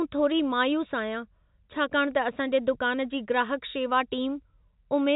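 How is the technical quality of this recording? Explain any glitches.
No glitches can be heard anywhere in the recording. The speech has the narrow telephone sound of G.711 telephone coding, with nothing above about 3.8 kHz, consistent with a 64 kbps mu-law line.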